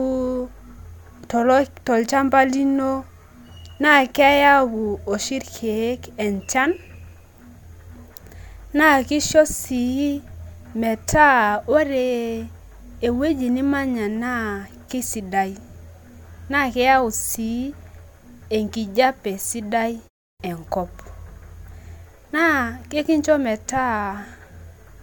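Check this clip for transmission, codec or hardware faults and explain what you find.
One fault is present: a clipped start after a pause at 20.31 s. After "enkijape sidai" and a 0.3 s gap, the output device has gone to sleep and must wake again. The first 87 ms, through 20.40 s, is lost, so the word bursts in without its opening sounds. On a waveform the envelope jumps from flat to full level. A spectrogram shows a hard vertical edge instead of a gradual onset.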